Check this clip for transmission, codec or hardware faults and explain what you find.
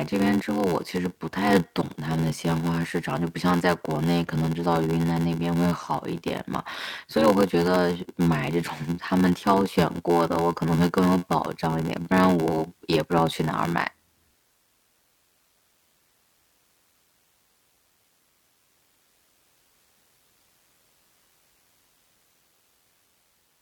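One fault runs through the whole clip: a block size mismatch (padded). Each stage writes shorter blocks than the next reads, fitting 512-sample blocks, and zeros fill the rest. The speech gains an 86.1 Hz buzz and plays at 0.861 times normal speed, with timbre roughly unchanged.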